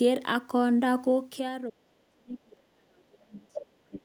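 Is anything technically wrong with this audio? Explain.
Yes. From 1.12 to 1.58 s, a gain reduction of roughly 10 dB is applied in unsmoothed 2 dB steps, about ten per second. Each jump puts a small click into the waveform, so a zipper noise ticks over the speech while the level falls.

Between 1.69 and 3.58 s, the echo canceller likely could not separate the talker from the loudspeaker while both sides spoke at once, so it turned everything down. This is speech suppressed in double talk: the voice dips, at worst by about 35 dB, in pieces totalling about 1.5 s.

The other side's voice is leaking through from 3.44 to 3.66 s, about 10 dB below the talker, and from 3.91 to 4.01 s, about 15 dB below. It likely comes from the loudspeaker's output reaching the microphone, which the echo canceller did not fully remove, so a second voice surfaces in brief scraps.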